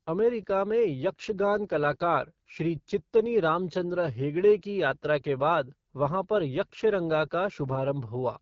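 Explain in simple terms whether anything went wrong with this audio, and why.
Yes, something went wrong: the speech passed through the AMR wideband (HD Voice) codec at one of its lowest data rates, squeezing the voice hard. From start to finish it sounds rough and raspy, and everything above about 7.5 kHz is missing.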